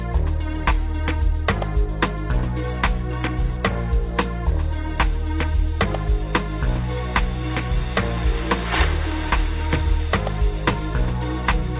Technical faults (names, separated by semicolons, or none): none